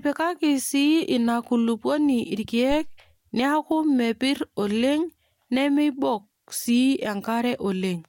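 Speech recording with a phantom power thump from 2.72 to 3.06 s: a deep low-frequency thump that decays over about 78 ms. A supply switched on or off on the live input sent a DC step through the coupling capacitors.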